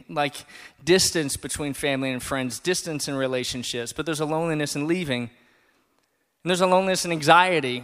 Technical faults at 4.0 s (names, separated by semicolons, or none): none